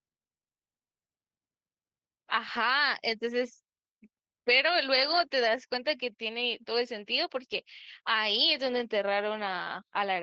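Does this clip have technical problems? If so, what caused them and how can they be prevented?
Yes. Two lost packets were rebuilt from error correction, at 8.39–8.41 s and 8.49–8.51 s. Each missing 20 ms packet was replaced by the low-bitrate copy carried in the next packet, so there's no gap, just two brief rough, noisier patches. On a spectrogram they show as short smeared, grainier columns with no dropout to silence, within the 8 kHz band of the 20 kbps Opus call. Reducing packet loss on the network path, for example with a wired connection, prevents this.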